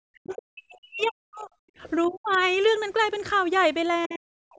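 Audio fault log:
0.07–1.57 s, 2.06–2.39 s and 4.06 s to the end: speech suppressed in double talk. The voice drops by about 35 to 40 dB or cuts out, likely because the echo canceller turned down both talkers at once.
0.27–0.35 s, 2.06–2.11 s, 2.33–2.37 s and 4.03–4.19 s: other side's voice leaking through. Brief scraps of a second voice sit around 30 to 35 dB below the talker, likely loudspeaker echo the canceller failed to remove.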